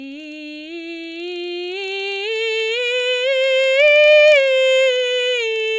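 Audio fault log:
throughout, resampler restarted on every block: 48 kHz to 16 kHz conversion reset each 40 ms block, leaving edge errors heard as a 25 Hz tick-buzz that follows the music and vanishes in silence, unlike a constant hum.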